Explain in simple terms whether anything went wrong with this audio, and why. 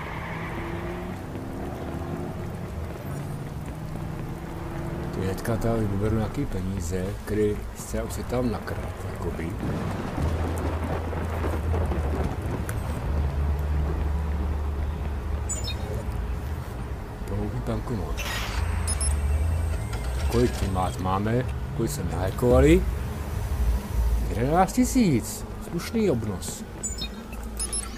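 From 22.28 to 24.28 s the audio turns thin, bright and hissy. This is pre-emphasis left on: the treble was boosted on the way in, following the CD-style curve, and the matching cut that should restore balance was never applied, leaving high frequencies too loud.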